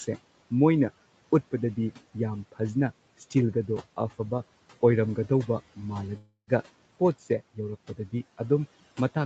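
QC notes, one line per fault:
6.17 to 6.50 s, call audio freeze: the speech stops and the last sound is carried on as a fading buzz for about 0.3 s, ending in roughly 90 ms of silence, after which the speech picks up exactly where it left off with nothing lost. This is likely a stall in packet delivery that drained the jitter buffer, so everything after it plays about 0.3 s late. On a spectrogram the last frame smears into flat horizontal bands that fade to a blank strip, and on the waveform there is a decaying tail and then a flat line.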